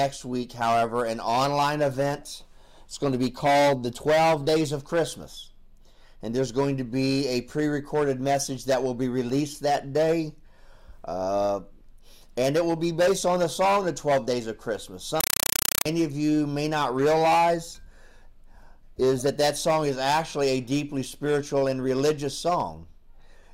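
A compressed stream played as audio, from 15.20 to 15.86 s, replaces the sound with loud chattering static: undecoded AC-3 frames land as 5.33 ms noise bursts, 31.25 times a second.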